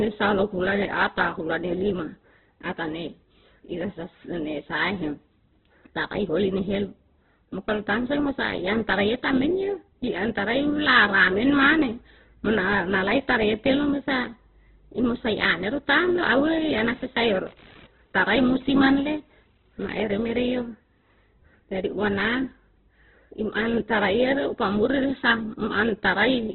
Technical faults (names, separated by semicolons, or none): Opus compression; computer activity noise